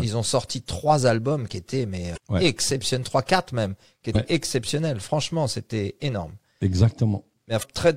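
Three short bursts of damaged data in the compressed stream hit this speech at 2.13 to 2.18 s, 4.12 to 4.16 s and 7.59 to 7.64 s. Bad bytes throw the decoder off its frames until it resyncs, so each lands as a brief glitch of about 40 ms.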